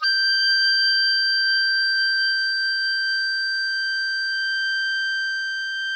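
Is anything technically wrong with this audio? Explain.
No, nothing is technically wrong with this music.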